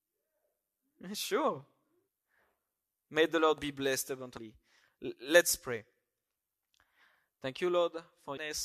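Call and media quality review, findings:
Damaged data in a compressed stream: short glitches at 2.07 s, 4.37 s (right after "be blessed") and 8.36 s in the speech. Decoder hitting corrupt frames, losing sync and skipping to the next header.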